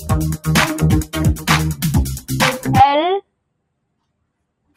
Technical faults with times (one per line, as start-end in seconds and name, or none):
0.00-4.76 noise suppressor applied to music or sounds
2.17-2.32 sound cut by the noise suppressor